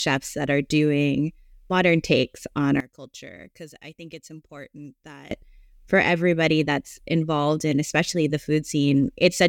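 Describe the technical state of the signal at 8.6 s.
At 8.6 s the speech signal is intact, with no audible technical fault at that point.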